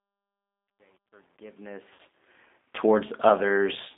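Speech heard throughout through the G.729 codec: the sound is confined to a narrow line band of about 250 Hz to 3.6 kHz, which fits an 8 kbit/s stream. It has the slightly rough, synthetic texture of a pitch-and-pulse model rebuilding each 10 ms frame, which sets it apart from a plain low-pass filter that would dull the sound without roughening it. The clip fades in smoothly from the start to 2.4 s, but truncation distortion on the fade makes that rise gritty and stepped. It is worst from 0.0 to 1.92 s, where the low level collapses into a few coarse steps, which fits roughly 9-bit resolution with no dither. Codec noise stays with the signal at every level, whereas this grit belongs only to the quiet part of the ramp. From 1.93 to 2.00 s, VoIP packet loss concealed by the speech codec replaces about 60 ms, which fits three lost 20 ms packets. The decoder stretches the last pitch and filter into a buzzy tone or coloured noise that fades, and because each frame builds on the previous one, the sound stays weak for a moment after packets return rather than cutting in cleanly like a simple dropout.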